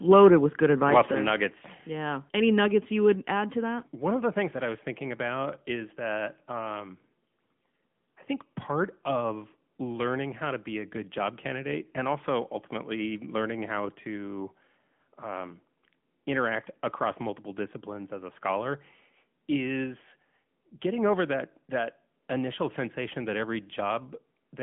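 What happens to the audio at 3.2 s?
At 3.15 s, between "nuggets you" and "add to that", the level of the speech and the background drops abruptly by about 4 dB and stays lower. There is no fade; it is a single step. This is most likely a microphone volume stepped down event: the call software judged the input too hot and cut the device's capture gain in one move, so everything after that instant arrives quieter.

That moment, like the rest of the clip, also passes through the AMR narrowband mobile codec. Content stops near 3.6 kHz and the line band runs from roughly 150 Hz to 3.4 kHz, which gives the dull, boxed-in telephone quality. The speech has a plainly audible buzzy, synthetic edge from the codec rebuilding it with a vocal-tract model and sparse pulse excitation. That degree of damage fits a mid-rate mode around 10.2 kbps.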